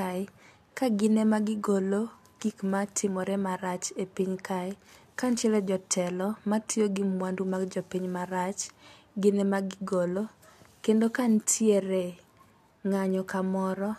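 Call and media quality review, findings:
Nothing stood out on listening through this speech recording.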